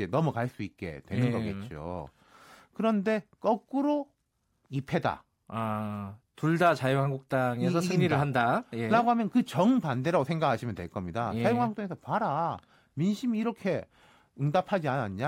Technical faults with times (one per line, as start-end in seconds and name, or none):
none